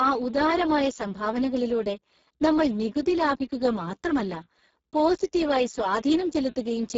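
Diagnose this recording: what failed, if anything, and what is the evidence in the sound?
The failure is at the codec stage: Speex compression, heard throughout the speech. The damage is heavy. Voices sound noisy and hoarse, edging toward robotic. Nothing reaches above 7.6 kHz, and the band above 4 kHz is only a shaped, hiss-like fill with no real detail. That points to wideband Speex at a very low setting, roughly 6 kbps. At that rate this CELP codec has too few bits to model the excitation, so the speech loses its natural texture.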